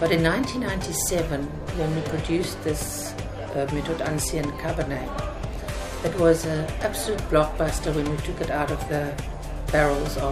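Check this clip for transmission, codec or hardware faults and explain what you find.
Nothing here suggests a transmission, codec or hardware problem, so there's nothing to flag.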